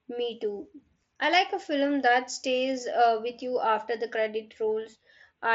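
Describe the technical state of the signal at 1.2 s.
At 1.2 s the speech is intact, with no fault, carried through the Bluetooth mSBC headset codec, whose wideband path leaves nothing above about 7.7 kHz.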